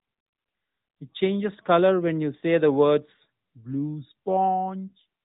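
Nothing stood out as a technical fault on listening to this clip.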